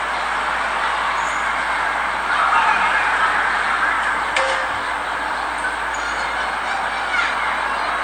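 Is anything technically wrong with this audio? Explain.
No, nothing technically wrong turns up here; these everyday sounds come across without any fault worth pointing to.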